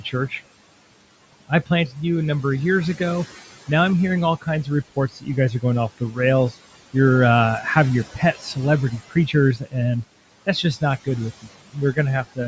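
Noise suppressor artifacts run through the whole clip: the room noise, sitting about 18 dB below the speech, is pulled down by about 17 dB in the gaps and returns beneath each phrase, so the background pumps with the talking. Unlike a noise gate, which shuts everything at once, this works band by band, frame by frame. The call processing's high-pass and the band ending at 8 kHz are normal.

Speech cut by the noise suppressor occurs six times, where the suppressor mistook parts of the speech for noise. The first is from 1.33 to 1.96 s, dropping up to about 17 dB. The second is from 4.41 to 5.28 s, after "I'm hearing all" and before "you guys are going", at about 14 dB. The third is from 5.98 to 6.18 s, following "guys are going off", at about 17 dB. The fourth is from 8.14 to 8.57 s, after "uh have your", at about 11 dB. The fifth is from 8.91 to 10.04 s, at about 17 dB. The sixth is from 11.42 to 12.39 s, at about 19 dB. 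In each span only a tenth to a few tenths of a second actually dips, so endings and soft consonants sound swallowed rather than the whole passage fading, which separates this from a level drop or dropout.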